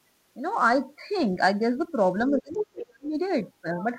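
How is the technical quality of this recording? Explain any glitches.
The recording has two related glitches in the second half, both around a stretch where two people seem to be talking at once.

Speech suppressed in double talk, from 2.3 to 3.14 s: the talker's speech is turned down for roughly 0.7 s in total, sinking by something like 35 dB at its deepest. The likely cause is an echo canceller that could not separate near and far speech, so it attenuated both.

The other side's voice leaking through, from 2.54 to 2.86 s: a second voice is audible under the talker, only a few dB quieter. This is likely far-end audio from the loudspeaker that the echo canceller failed to remove from the microphone signal.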